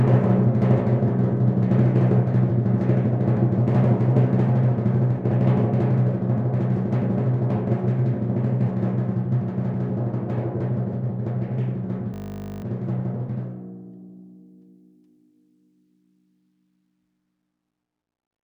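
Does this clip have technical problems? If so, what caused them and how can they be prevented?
Yes. A system hang loop runs from 12.14 to 12.62 s. The music gives way to a steady buzz at 50 Hz because the computer or its audio driver stalled while the sound hardware kept replaying the same 20 ms stretch of its ring buffer, about 24 times over. That buffer length fits a short output buffer, and roughly half a second of the music is lost. Preventing it means keeping the audio thread at real-time priority and fixing driver or system stalls.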